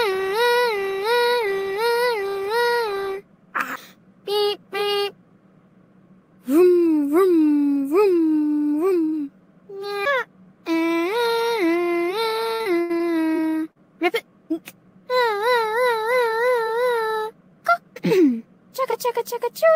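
The audio has two packet-loss faults. From 12.55 to 13.01 s, repeated packet loss struck in four gaps, the longest about 79 ms. The receiver covered each by extending the preceding sound, so roughly 39 percent of that stretch is synthetic fill, which makes it choppy with pieces missing. At 13.71 to 13.78 s, a short concealed packet loss left about 40 ms missing, and the decoder bridged it with continued sound before blending back, leaving a brief smear or wobble.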